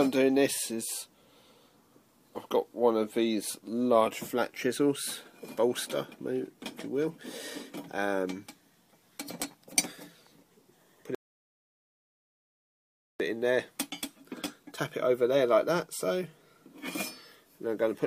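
At 11.15 s the player exhausted its downloaded audio and halted to wait for more data, a rebuffering stall. The sound drops to silence until 13.20 s, then picks up exactly where it stopped, with nothing missing but about 2.05 s of dead air added.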